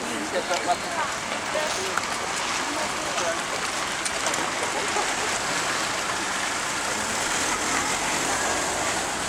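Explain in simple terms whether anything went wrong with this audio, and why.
Something did go wrong, briefly. From about 1.61 to 1.83 s there's a short burst of processor overload crackle, a gritty tearing on top of the sound. The computer was too busy to hand over each tiny slice of audio on time, so it missed about ten deadlines in quick succession, each leaving a sharp-edged dropout of silence. The gaps sound like very small chunks, around a millisecond and a half each, and the crackle stops once the load eases.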